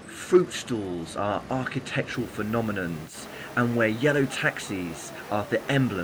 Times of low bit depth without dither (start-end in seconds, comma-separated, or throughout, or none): 2.14-6.04